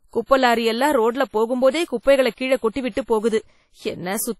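A ringing, washy quality runs through this speech clip from start to finish, with a hiss that swells and recedes along with the voice, weak detail dropping out, and nothing above about 15.7 kHz. The damage is heavy, and it is likely WMA compression. The long transform blocks smear quantisation noise over tens of milliseconds, and the thinness points to a low bitrate around 32 kbps, where quieter spectral lines are simply zeroed. Between 2.72 and 2.76 s a sharp onset arrives with a brief hiss in front of it and a softened, smeared attack. This is pre-echo: the attack fell late in a coding block, so noise scaled to the loud part was spread back across the quiet stretch before it, about 42 ms ahead.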